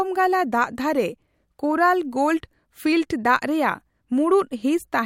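No technical fault can be heard anywhere in the recording, and the signal stays steady and intact throughout.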